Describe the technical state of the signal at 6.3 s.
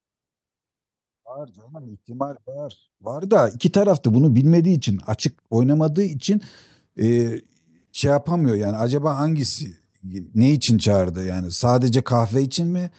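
At 6.3 s the speech is intact, with no dropout, glitch or other fault at that moment, only the ordinary character of the call path it travelled through.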